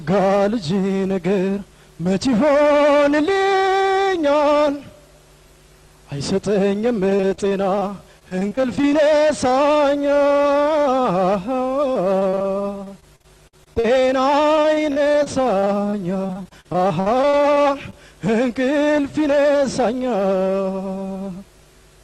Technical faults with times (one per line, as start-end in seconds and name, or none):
7.09-7.83 repeated packet loss (robotic sound)
8.19-8.93 repeated packet loss (robotic sound)
11.93-12.46 repeated packet loss (robotic sound)
12.84-13.86 repeated packet loss (robotic sound)
14.56-17.94 repeated packet loss (robotic sound)